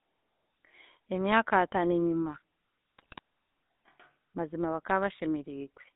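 The whole clip carries the GSM full-rate codec. Nothing passes below about 250 Hz or above 3.7 kHz. The coder rebuilds speech from a vocal-tract filter and a sparse pulse excitation, which fits a 13 kbps full-rate stream. The result is a plainly audible buzzy, gravelly roughness.

From 2.98 s to 3.19 s, GSM bit errors break the speech apart. Corrupted filter, pitch and gain values reach the decoder. The spectrum bends and the level jumps frame by frame. The damage sounds like squawks, pops and gargling, and its length fits about ten hit frames.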